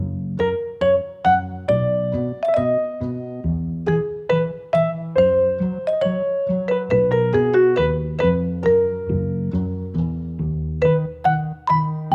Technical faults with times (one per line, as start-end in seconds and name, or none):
none